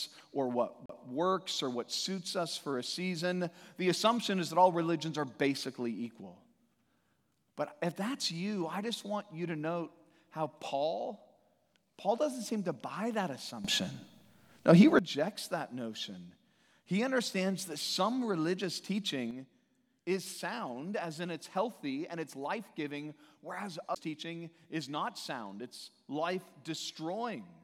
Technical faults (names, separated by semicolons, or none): CD skip; sudden gain jump